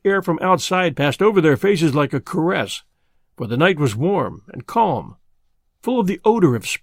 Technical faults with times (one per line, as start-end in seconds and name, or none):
none